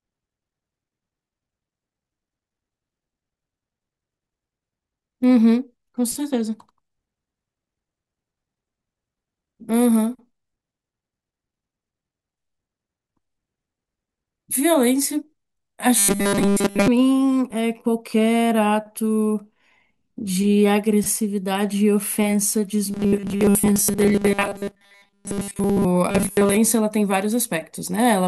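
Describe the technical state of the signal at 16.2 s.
At 16.2 s the speech has collapsed into a rigid, metallic buzz pitched at 200 Hz, still loosely tracking the syllables, from 15.98 to 16.88 s. This is robotic sound from repeated short buffers: new audio is likely arriving too seldom, so a short slice, about 5 ms to match that pitch, is replayed to fill the gaps. Roughly two thirds or more of the span is such repeats, and the skipped real audio is lost.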